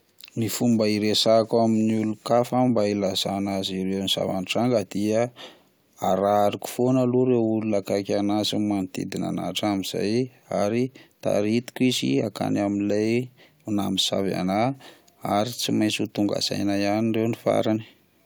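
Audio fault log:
Nothing in the speech stood out as a fault on listening.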